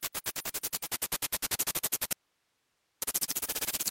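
Everyday sounds here, and at 0.82 s you can hear digital radio blending to analogue: the receiver loses the digital stream and cross-fades over about 116 ms to the station's FM feed. The level shifts by about 3 dB, and a hiss floor around 40 dB down comes in. It blends back to digital at 3.32 s. Inside that stretch there's an audio dropout to a faint residue from 2.13 to 3.02 s, roughly 0.89 s, where the sound cuts off abruptly and only hiss remains, something like 45 dB below the signal. Since the path stays live with just noise in the gap, it's likely the wanted signal was briefly lost while the path after the break stayed live, rather than a deliberate pause or fade.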